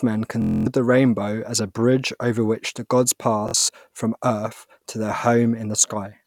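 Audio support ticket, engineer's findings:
Bluetooth stutter, 0.42–0.67 s and 3.49–3.69 s. Speech breaks into rapid buzzing repeats, about 230 ms then about 140 ms lost; link dropouts, receiver replaying last buffer, playback resumes ahead.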